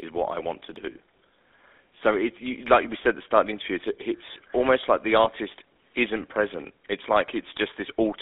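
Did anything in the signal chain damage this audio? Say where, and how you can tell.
Yes. GSM full-rate codec, throughout (codec stage): sound is confined to about 250 Hz to 3.6 kHz with a buzzy, gravelly roughness from pulse-excited vocal-tract modelling, which fits 13 kbps GSM.

Lost GSM frames, 5.24–5.27 s, right after "it's almost like the" (network stage): a brief rough, metallic hold where concealment repeated the last good frame's settings, consistent with a single dropped 20 ms frame.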